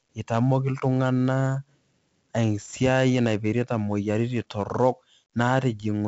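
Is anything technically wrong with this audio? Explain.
Yes. Throughout the speech there is 4-bit ADPCM compression. Each sample is coded as a coarse step from a prediction, so heavy grit and hiss follow every loud syllable and attacks distort. Nothing is present above 7.7 kHz, which fits 64 kbps at a 16 kHz sample rate.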